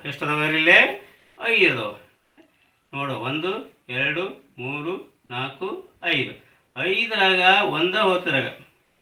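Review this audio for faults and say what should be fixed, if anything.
Comfort noise in place of the background at 1.21–1.33 s and 2.23–2.35 s: each 120 ms stretch of quiet background, about 46 dB below the loud parts, turns into steady, featureless hiss, about 6 dB louder in the first gap and about 2 dB quieter in the second. This is likely Opus discontinuous transmission, where the sender stops sending during quiet and the receiver fills in synthetic noise. Disabling DTX on the sending encoder would keep the real background intact.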